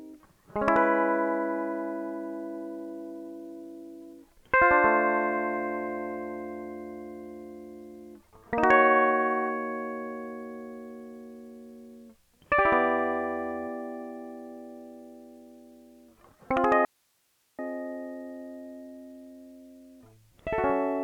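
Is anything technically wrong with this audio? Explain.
Yes, there's an audio dropout to a faint residue from 16.85 to 17.59 s. The music cuts out abruptly for about three-quarters of a second, leaving only hiss roughly 40 dB down, likely the signal dropping while the path after the break stayed live.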